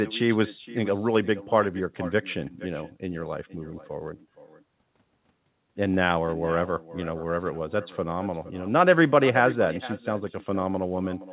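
From the first second to the end, every phrase is trailed by a fainter copy of itself about half a second later, sitting about 16 dB below the speech. This is echo with no canceller: the far end's loudspeaker feeds its microphone and nothing subtracts it, so the sound returns after the network round trip. The delay sets it apart from room reverberation, which smears continuously. Here the repeat is discrete and offset, with the same 4 kHz ceiling as the direct sound, a band limit that fits a G.711 mu-law call path.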